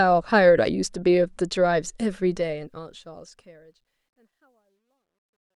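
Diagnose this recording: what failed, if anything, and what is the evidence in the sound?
The fade-out turns gritty from 2.22 s and is worst between 3.76 and 5.55 s. This is truncation distortion on a fade: an undithered gain or sample-format stage, consistent with about 12 bits, reduces the quietest samples to a few coarse square steps.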